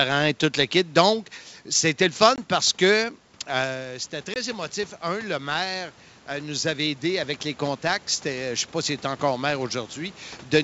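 A French speech clip carried over G.722 wideband telephone coding, with clear sound up to about 7 kHz in a way that fits 64 kbit/s. There are two packet losses on an ADPCM call. After "c'était le", at 2.36 to 2.39 s, a hard-edged 20 ms hole opens before "parce que". A second one follows at 4.34 to 4.37 s. After each, the decoder's predictor and step size are out of step with the sender's. The sound returns slightly distorted, then settles. Automatic gain rising follows the talker moving away at about 3.5 s, which drops the input about 10 dB. From 3.55 s, just after "parce que", to 10.25 s, the gain climbs gradually by about 8 dB. The voice and the room noise swell together.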